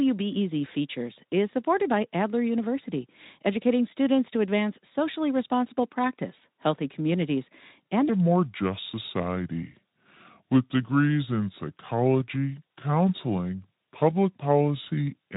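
A section at the wrong speed runs from 8.09 s to the end of this speech clip, just after "practice healthy communities and", where playback drops to 0.683 times the original rate, so the talker turns slow and deep, roughly seven semitones lower, likely from that stretch being played against the wrong clock. The Speex coding underneath leaves nothing above 3.8 kHz and only light codec roughness.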